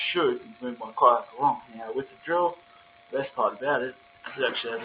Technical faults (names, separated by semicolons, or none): noise suppressor applied to music or sounds; sound cut by the noise suppressor